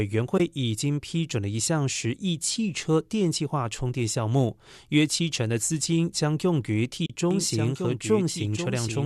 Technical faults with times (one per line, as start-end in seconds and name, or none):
0.38-0.40 AAC frame loss with muting
7.05-7.10 AAC frame loss with muting
7.31-9.05 doubled audio track